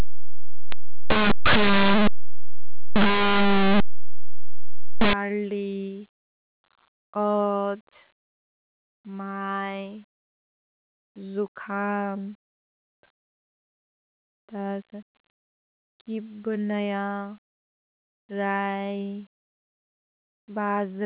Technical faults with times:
0.00-5.13 linear audio read as companded

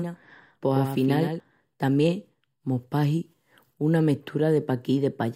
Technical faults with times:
0.00-1.40 doubled audio track

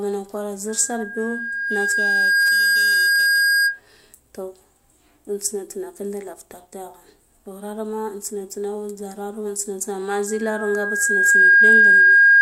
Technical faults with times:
0.68-3.80 loudspeaker feedback squeal
10.27-12.42 loudspeaker feedback squeal

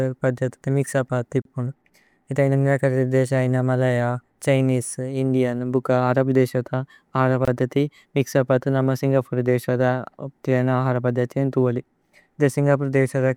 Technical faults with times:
1.42-1.45 gap at a join of encoded pieces
7.45-7.48 gap at a join of encoded pieces

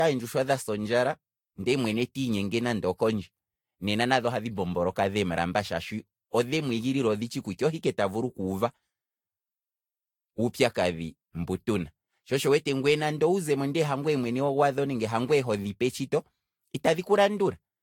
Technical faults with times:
0.00-17.82 generation loss

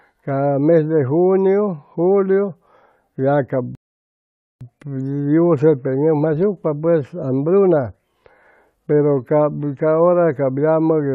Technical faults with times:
3.75-4.61 rebuffering stall

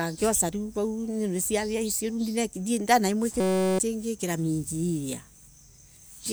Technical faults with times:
3.40-3.79 system hang loop

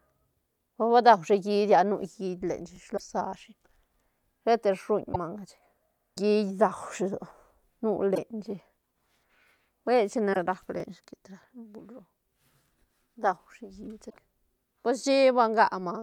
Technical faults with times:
2.76-2.78 overlapping chunks
2.94-3.00 damaged data in a compressed stream
5.10-5.16 damaged data in a compressed stream
6.78-6.80 overlapping chunks
8.12-8.18 damaged data in a compressed stream
10.30-10.37 damaged data in a compressed stream
10.80-10.82 overlapping chunks
14.06-14.14 damaged data in a compressed stream
14.82 overlapping chunks

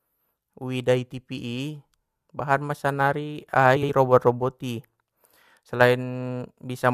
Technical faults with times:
3.76-3.90 frames out of order

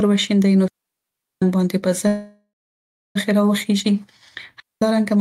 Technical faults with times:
0.68-1.42 digital wireless dropout
2.07-3.17 call audio freeze
4.60-4.82 digital wireless dropout

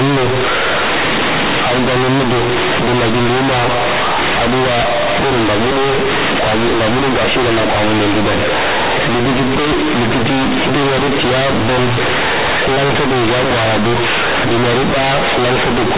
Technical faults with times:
0.00-15.98 companded audio read as linear

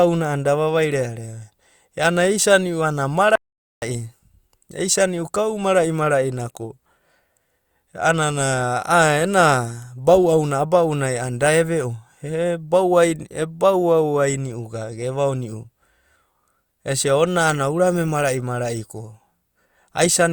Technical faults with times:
3.35-3.82 audio dropout to silence

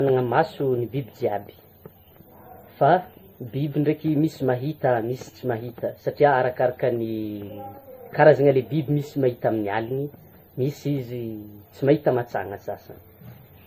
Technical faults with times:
0.00-13.66 transcoding between lossy codecs

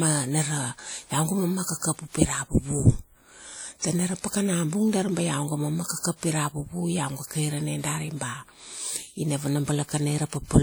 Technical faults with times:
0.00-10.63 WMA compression
5.99-6.03 pre-echo

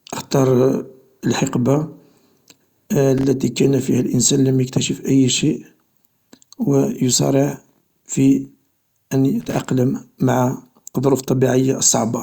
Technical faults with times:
3.18-3.24 loose connector crackle
9.41-9.69 loose connector crackle

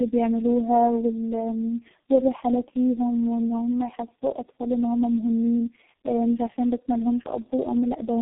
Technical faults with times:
0.00-8.22 tandem speech coding

